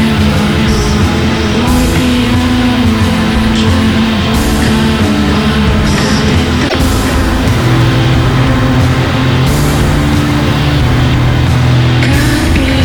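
At 6.65 s the sound breaks up for about 95 ms, ending at 6.75 s. This is damaged data in a compressed stream: some bytes in the encoded file were lost or corrupted, so the decoder misread those frames and lost sync until it found the next valid frame header. A network dropout or buffer underrun leaves silence or a clean gap. This one comes from misread frames instead.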